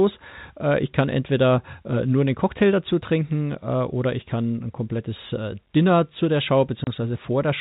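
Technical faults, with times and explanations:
6.84–6.87 s, packet loss filled with silence: just after "zu der" the speech drops out into a 30 ms hole with abrupt edges, which points to a single lost packet that the receiver replaced with silence rather than concealing, heard over the band-limited G.711 telephone sound.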